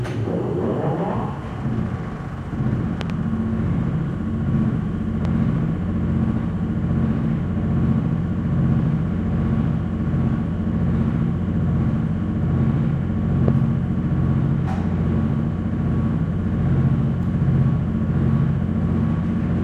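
Sounds with four loud pops: a double pop at 3.01 to 3.12 s, about 15 dB above the sound, then single pops at 5.25 to 5.27 s and 13.48 to 13.50 s, about 10 and 15 dB up. The sound continues beneath each. Likely cause: sudden voltage pulses from a plug, switch, static or driver glitch.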